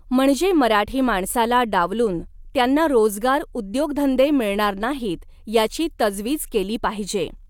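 A speech recording with no technical faults to report: the signal holds steady throughout, with no dropouts, glitches or level problems at any point.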